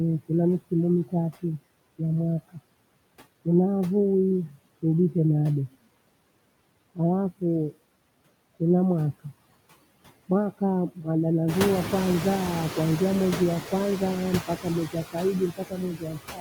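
Across the whole recording the background pumps down in the gaps and swells back under the talker. These are noise suppressor artifacts: the processor estimates the steady noise and pulls those bands down by about 18 dB, frame by frame.

From 11.48 to 12.83 s the background suddenly comes through much louder and only gradually settles. This is the noise suppressor catching up. The room noise jumps by about 13 dB around 11.5 s, and the suppressor's estimate lags behind. At first it removes only about 4 dB, then adapts over 1.35 s. After that the noise sits about 10 dB below the speech.

From 15.51 s to the end at 16.41 s, the final stretch of talking fades and sounds swallowed, with its softer parts losing presence. This is speech cut by the noise suppressor: it mistook that speech for background and turned it down by as much as about 18 dB.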